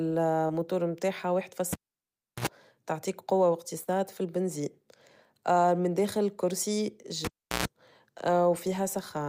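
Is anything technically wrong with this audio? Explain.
Yes. Short concealed packet loss occurs at 0.47 to 0.51 s, just before "متاعها واحد فاص", and again at 3.83 to 3.89 s. About 20 ms and then 40 ms of the speech never arrived in time, so the receiver extended the preceding sound and blended back, leaving a brief smear or wobble.

A cable pulled and plugged in occurs at 1.73 to 2.47 s, between "متاعها واحد فاص" and "تعطيك قوة", and again at 7.25 to 7.65 s, just after "من داخل الكرسي". Each event opens with a pop and then near silence, for about 0.7 s and then 0.36 s. A 60 Hz mains buzz lasts about 70 ms and then 120 ms while the plug makes partial contact, and a second pop follows as the speech returns.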